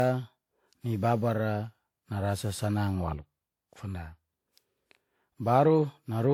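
From start to finish the speech has a swirly, smeared, hollow quality, with consonant attacks blurred and a watery texture that seems worse than a reasonably high bitrate should give, even though content extends to about 20.1 kHz. This is generation loss, most likely from the audio being decoded and re-encoded around seven times through a lossy codec, which fits a WMA chain near 128 kbit/s, each pass quantising on a shifted frame grid.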